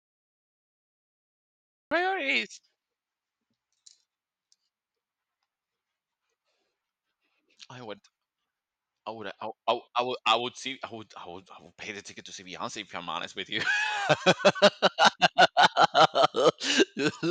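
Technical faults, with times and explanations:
0.00–1.91 s, cut-off start: The audio is digital silence until 1.91 s. Speech then appears abruptly, already partway through a sound. There is no natural onset or fade-in. The recording or stream began late, so the opening of that utterance was lost.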